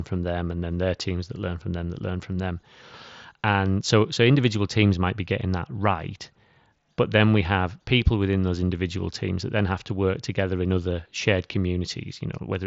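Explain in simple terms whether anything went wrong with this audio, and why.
Nothing went wrong here: the speech comes through a Bluetooth headset link that's working the way it's meant to, so there's no dropout, glitch or other fault to point to at any moment.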